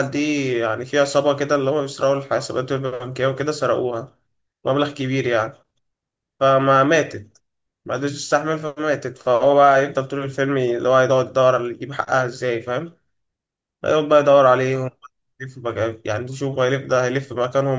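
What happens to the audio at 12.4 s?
At 12.4 s the speech carries on cleanly, with no dropout, click, distortion or other audible fault at that point.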